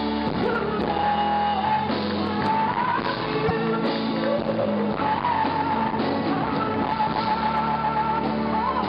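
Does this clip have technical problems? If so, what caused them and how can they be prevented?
Yes, there's a short burst of damaged data in a compressed stream from about 3.46 to 3.51 s. Corrupted bytes there throw the decoder off, so it loses frame sync until it catches the next valid header. Checksummed transfer and verified storage would prevent it.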